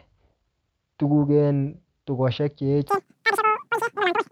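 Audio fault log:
2.89–4.31 s, wrong sample rate. Right after "tuguk en tukoshek che", the speech jumps to a shrill, racing chatter until the clip ends. The samples are being read out far faster than they were captured, with no conversion between rates. That fits 16 kHz material played at 44.1 kHz. Speed rises by 2.76 times. Pitch rises with it, by about 17.6 semitones, well over an octave. Both shift together, which gives the chipmunk-like, hurried sound.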